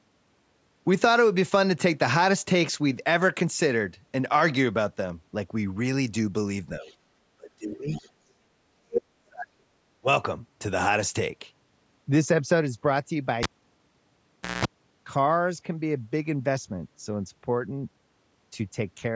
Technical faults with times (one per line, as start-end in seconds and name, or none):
6.79-6.86 speech suppressed in double talk
6.82-6.96 other side's voice leaking through
7.37-7.91 speech suppressed in double talk
7.94-8.10 other side's voice leaking through
8.54-9.56 speech suppressed in double talk
10.00-10.07 speech suppressed in double talk
13.43-14.65 cable pulled and plugged in